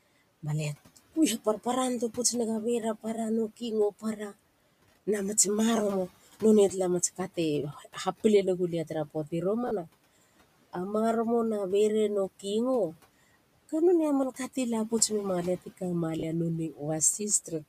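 Between 3.91 and 4.36 s the noise suppressor cut into the speech, mistaking part of it for background and pulling it down by as much as about 17 dB. Only a fraction of that span, something like 150 ms, is affected, so a few soft sounds come out swallowed. The same thing happens more gently from 7.73 to 7.96 s, just before "ha pile", where the dip reaches about 9 dB and the speech there sounds faint.

Lost LE Audio frames appear at 9.67 to 9.71 s and again at 16.19 to 16.23 s, each a 40 ms gap, which fits four 10 ms frames. The LC3 decoder filled each gap by repeating the last spectrum with randomised phase. Over so short a loss this is heard as a quick grainy, noisy smear in place of clean speech rather than a drop to silence. The room noise, about 20 dB below the speech, carries on under both.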